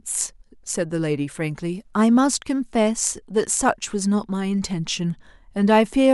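No technical faults can be heard anywhere in the speech recording; the signal stays steady and intact throughout.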